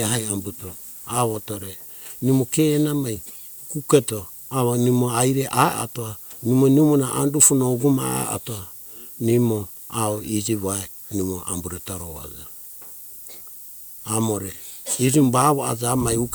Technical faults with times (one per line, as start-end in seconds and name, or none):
0.00-16.34 low bit depth with noise shaping